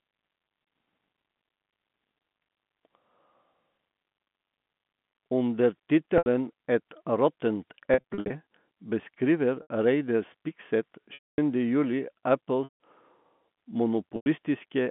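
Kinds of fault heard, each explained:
Packet loss with pitch repetition: dropouts at 6.18 s, 7.94–8.30 s, 9.62 s, 11.14–11.38 s, 12.64–12.79 s and 14.16–14.26 s, where the receiver bridged missing audio by looping the last pitch period and fading it over about 50 ms. The 80 to 100 ms losses sound like a briefly held, buzzy tone. The 240 ms gap at 11.14 s decays into silence before the speech cross-fades back, and the 7.94 s stretch is a scattered cluster of short losses.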